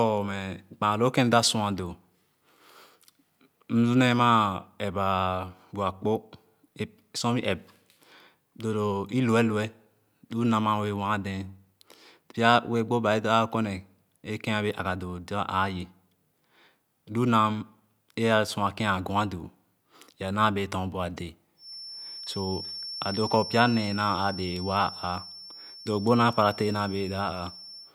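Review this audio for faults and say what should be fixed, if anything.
Feedback whistle, 21.55 s to the end at 27.94 s: a thin, steady 5.4 kHz tone sits about 15 dB under the speech and swells and fades slowly in level. The likely cause is a loudspeaker-to-microphone loop held right at the feedback threshold, sustaining one frequency without running away. To prevent it, lower the monitor gain, keep the microphone off the loudspeaker's axis, or notch the system around 5.4 kHz.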